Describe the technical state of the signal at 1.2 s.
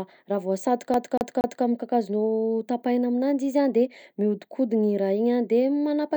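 At 1.2 s the playback is caught in a CD stuck on one turn: from 0.94 to 1.65 s the laser jumps back at the same point on each rotation, so a 235 ms slice of speech repeats three times, each pass cut by a brief mute, giving a rapid, even stutter.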